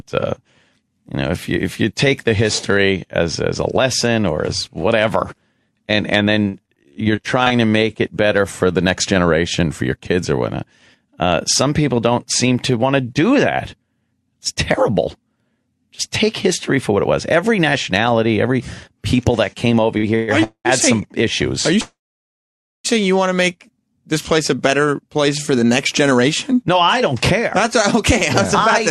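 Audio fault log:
6.48–7.52 s, repeated packet loss (robotic sound): twelve separate holes in about one second, the longest 45 ms. Each was papered over by extending the preceding sound, 252 ms in total, roughly a quarter of the stretch, while 180 ms of real audio never arrived. Because the patches come back-to-back, the sound turns choppy, and short pieces are simply absent.
17.41–17.93 s and 23.87–28.89 s, jitter buffer speed-up: the receiver was holding more audio than it wanted and trimmed it by cutting out tiny pitch-period slices again and again. In the first span the audio runs about 6% fast, losing around 40 ms. In the second it runs about 4% fast to the end, shedding around a fifth of a second. The pitch stays put, but the first span's pacing sounds slightly rushed.
19.98 s, short stall from a late packet: a packet missed its slot, the buffer emptied, and the last sound was stretched by 56 ms until the data turned up. 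Playback then resumed from where it left off, so nothing is lost, but one moment is audibly held too long with a faint buzz or dip. That adds 56 ms to the delay.
20.15–20.30 s, 20.44–20.67 s and 21.81–22.86 s, call audio freeze: the sound stops moving forward and the last bit is drawn out as a fading buzz or hiss, for 124 ms, 211 ms and just over 1 s. The second includes about 90 ms of silence and the third about 0.9 s. The likely cause is packets stalled in transit draining the jitter buffer. Afterwards the audio picks up exactly where it stopped, inserting gaps rather than dropping anything.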